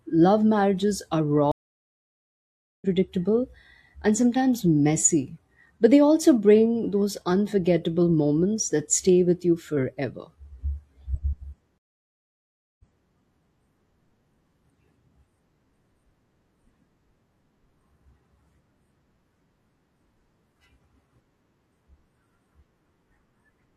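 Stream reconnect at 1.52 to 2.86 s: the connection dropped and the player restarted its decoder mid-stream, leaving 1.3 s of silence. The speech picks up roughly 0.7 s further on, so a short stretch is skipped, with the first frame or two muted or faded in. A second stream reconnect at 11.78 to 13.09 s gives 1.01 s of silence, then resumes 0.3 s earlier, as the server resent a burst, so a fragment is heard twice.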